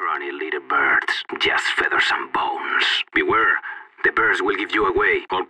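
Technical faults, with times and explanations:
No technical faults are audible anywhere in the recording, and the signal stays steady and intact throughout.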